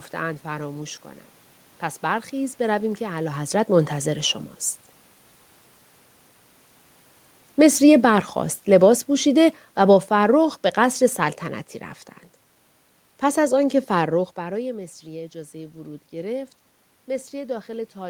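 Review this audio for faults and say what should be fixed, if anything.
Automatic gain falling from 7.46 to 11.43 s: the gain control judged the input too loud or its background noise too strong and eased its gain down by about 7 dB over those four seconds, so the speech and the room noise behind it sink together rather than the talker simply moving, as happens around 3 s and 14 s. To prevent it, lower the input level at the source or give the automatic gain control more headroom so it doesn't need to pull back mid-recording.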